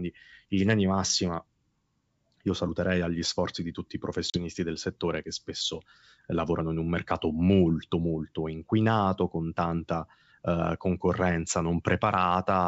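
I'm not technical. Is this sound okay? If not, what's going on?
No. At about 4.30 seconds, just after "sforzi di tutti i", the speech drops out for a very brief moment, about 40 milliseconds. It comes back by 4.39 seconds, before "del settore che spesso", with a small click or rough edge. This is packet loss on an ADPCM call. A couple of chunks of audio went missing and were filled with silence. The receiver briefly lost track of the sound and needed a moment to catch up.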